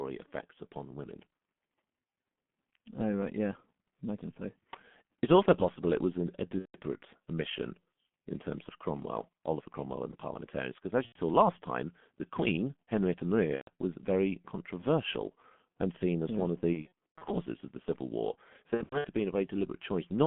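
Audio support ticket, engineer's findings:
G.723.1 codec, whole clip: muffled, hoarse speech, smeared consonants, band about 150 Hz to 3.4 kHz, fits 6.3 kbit/s. Constant, unlike the dropouts.

VoIP packet loss concealed by the speech codec: buzzy, fading stretches at 6.60–6.77 s (between "it was an a" and "omission in terms of"), 11.06–11.17 s, 13.55–13.69 s, 16.74–17.32 s ("as yeah one of" to "of the") and 18.74–19.07 s (before "have been"). The decoder repeats its last pitch and filter with falling gain. Gaps are about 90 to 270 ms, in 30 ms frame steps. The last two are scattered runs of up to 90 ms. A bare codec would not add these tonal tails.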